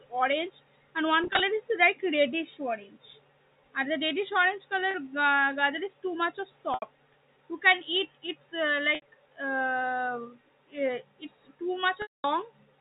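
Packet loss with pitch repetition breaks the speech five times. After "orange and" at 1.24 s, 70 ms drops out in short gaps over 160 ms. Another 30 ms goes at 4.91 s. After "is too much of" at 6.74 s, 80 ms is lost. After "can eat it's uh" at 8.95 s, 70 ms goes. At 12.02 s, 220 ms is lost. The receiver repeats the last pitch period to fill each gap. Short gaps sound held and buzzy. The long one fades to silence.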